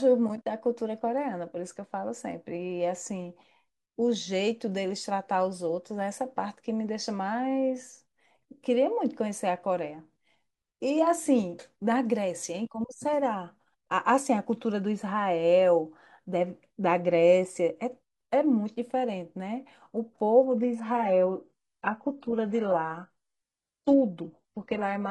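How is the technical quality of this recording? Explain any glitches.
One quality fault appears, in the final seconds. From 20.52 s to the end, the adaptive stream drops to a lower bitrate: treble turns suddenly synthetic, which fits 12 kbit/s HE-AAC, with no gap, unlike rebuffering.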